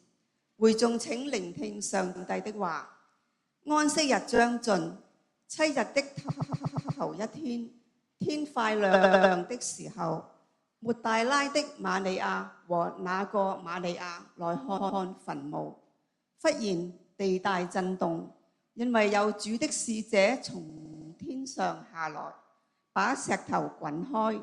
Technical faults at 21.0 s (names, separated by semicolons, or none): repeated frames